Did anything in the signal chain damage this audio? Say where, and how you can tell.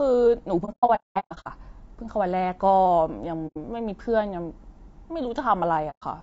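Yes, at the codec stage. Throughout the speech the sound is rough and grainy, with a hiss-like fill between the pitch harmonics and a top band that sounds thin and synthetic. This is likely low-delay AAC compression, AAC-ELD at a bitrate around 32 kbps, as used in video calls. Its short frames cannot resolve the harmonics finely, and at this rate the encoder runs short of bits, so noise creeps in and the highs are rebuilt roughly.

Between the network and the decoder, the speech drops to silence in soft-edged holes. From 0.65 to 1.47 s there is a cluster of gaps totalling about 600 ms over that stretch, the longest about a fifth of a second. Shorter holes follow at 3.47 to 3.57 s (90 ms) and 5.90 to 6.03 s (120 ms). This is AAC frame loss with muting: missing frames were decoded as zero spectrum, and the overlapping windows fade each hole in and out.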